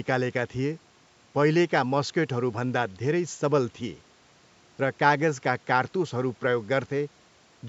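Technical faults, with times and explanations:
No technical faults can be heard in this speech clip.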